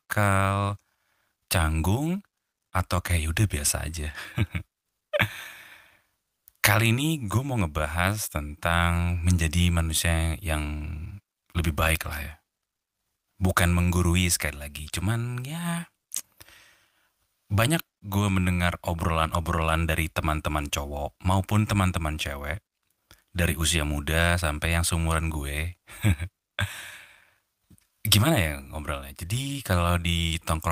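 No technical faults can be heard anywhere in this speech recording. Nothing in the signal path calls for comment at any point.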